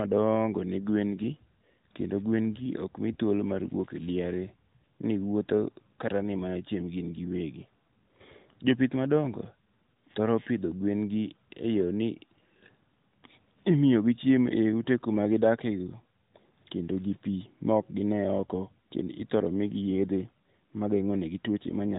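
No faults heard; the speech runs through the AMR narrowband mobile codec at 12.2 kbps with its usual 3.8 kHz top end and only light codec colouring.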